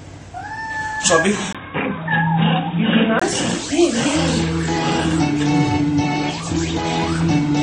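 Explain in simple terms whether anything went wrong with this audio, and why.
From 1.53 to 3.22 s the sound turns dull and boxy, with nothing above 3.8 kHz, a 20 ms gap at the start, and a faint new background noise at unchanged loudness. The likely cause is an input switched to a poorer device.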